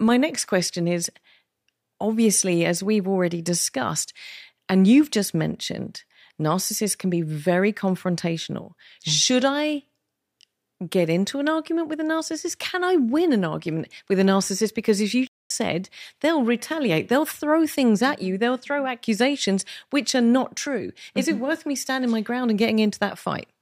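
Speech with a playback stall from 15.27 to 15.51 s: after "as you" the output drops to silence for about 0.23 s, then resumes with "said they'll retaliate they'll". The waveform shows a flat gap and the spectrogram a blank vertical band, likely from a player buffer underrun or blocked audio thread.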